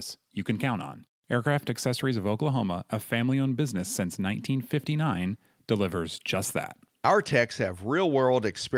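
No technical faults are audible.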